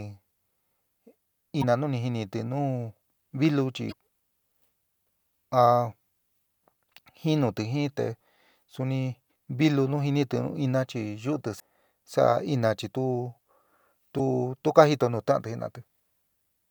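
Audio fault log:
1.58–1.64 s, 3.88–3.94 s, 9.26–9.29 s (just before "vilu nu jinitɨ nu"), 11.56–11.60 s (right after "nu ina chi yuutɨ") and 14.15–14.20 s (just before "tu ka"), damaged data in a compressed stream: brief chirps, squawks, clicks or short holes of 26 to 56 ms break the speech. Corrupted bytes make the decoder misread frames, lose sync and skip forward to the next valid frame header.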